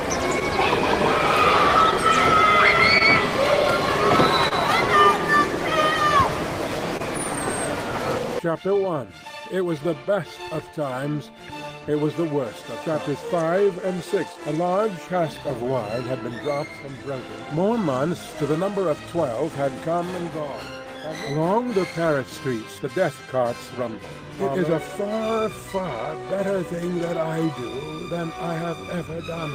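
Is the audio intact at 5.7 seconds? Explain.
No, clock drift between sender and receiver runs throughout: the sender is about one percent slow, so the draining jitter buffer repeats short pieces, giving small timing hiccups at uneven intervals rather than isolated dropouts.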